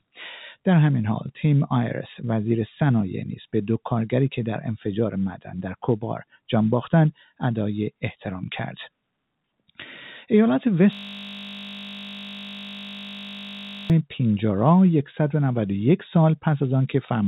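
At 5.35 to 5.52 s and again at 7.12 to 7.42 s, the noise suppressor took stretches of the audio for noise and turned them down, causing sound cut by the noise suppressor. It cut about 11 dB in the first case and about 16 dB in the second, each for a fraction of a second. The level dips while sharper onsets stay mostly intact.

From 10.93 to 13.90 s, a system hang loop sets in. The computer or driver stalled while the audio hardware kept replaying one 20 ms piece of its buffer, roughly 150 times over. At a 50 Hz loop rate this comes across as a steady, rough buzz in place of the sound for about three seconds. Throughout, the call path's narrow band, with nothing above 4 kHz, fits G.711 A-law at 64 kbps.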